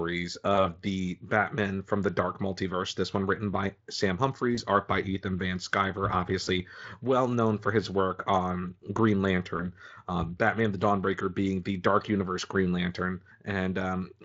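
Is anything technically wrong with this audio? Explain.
Yes, there are four short dropouts where VoIP packet loss was concealed by the speech codec. They fall at 0.55–0.69 s, 4.55–4.62 s just before "art by", 6.43–6.51 s just before "well known for his", and 9.57–9.68 s. Each time, the decoder stretches its last pitch and filter to fill the gap while fading the gain, so you hear a brief buzzy or noisy, smeared blip that takes a moment to recover. Most sound like a single lost 20 ms frame, though the one at 6.43 s points to two frames, about 40 ms. Underneath all of this is light Speex coding, consistent with roughly 24 kbps.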